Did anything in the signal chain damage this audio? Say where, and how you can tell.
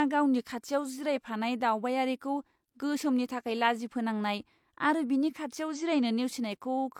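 Yes: damaged data in the compressed stream, codec/storage stage, 5.72 to 5.78 s, right after "बिनि खाथियाव". A 60 ms glitch as the decoder lost sync and hunted for the next frame.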